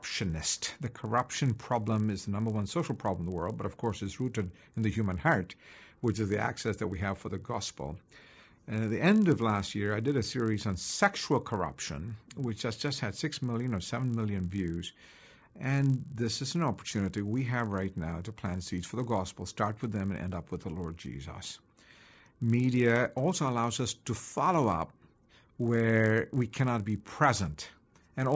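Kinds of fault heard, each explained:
Resampler restarted on every block: the 48 kHz to 16 kHz conversion ran afresh on each 20 ms block, leaving edge errors heard as a 50 Hz buzz under the speech.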